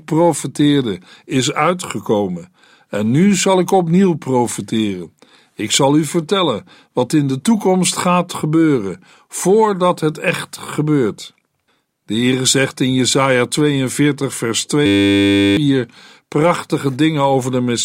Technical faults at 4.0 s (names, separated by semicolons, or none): none